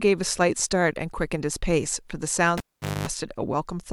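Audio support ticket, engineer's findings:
Cable pulled and plugged in, 2.58 to 3.08 s. Pop at 2.58 s as the live connector leaves the jack, then about 0.45 s of near silence. A 0.23 s burst of 50 Hz mains buzz occurs within it while only the tip makes contact and the shield is still open. Second pop at 3.08 s as the plug seats and the speech returns. Probable component: a loose or disturbed input cable or connector.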